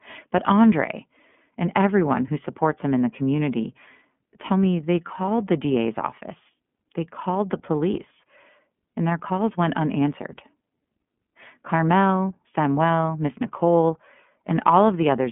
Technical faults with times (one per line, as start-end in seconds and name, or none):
0.00-15.32 iLBC codec